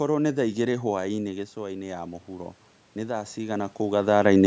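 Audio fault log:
1.33–4.42 s, automatic gain rising: after the level drops by about 10 dB, the gain control treats the input as too quiet and slowly adds about 12 dB over roughly three seconds. The speech and the room noise swell together, which separates this from a talker moving closer; the talker shifting around 1 s and again near 3.5 s changes only the speech level and leaves the background where it was.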